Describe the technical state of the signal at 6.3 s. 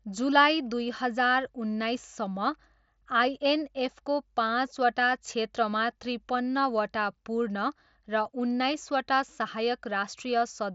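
At 6.3 s the speech is intact, with no dropout, click or distortion, only the Bluetooth mSBC headset codec's normal wideband limit, with nothing above about 7.7 kHz.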